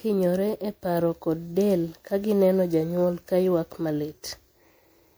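Speech affected throughout by generation loss: a swirly, hollow, smeared texture with blurred attacks, likely from repeated MP3 re-encoding, around seven passes, consistent with 128 kbit/s.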